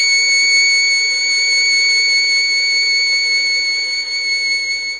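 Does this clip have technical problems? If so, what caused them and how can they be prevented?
Yes. The music is smeared, ringing and washy throughout, with hiss that swells and fades with the signal and nothing above 10.5 kHz, likely from heavy WMA compression at a very low bitrate, around 24 kbps. Unlike a plain low-pass filter, the damage also smears time. Prevent it by encoding at a much higher bitrate or keeping a lossless master.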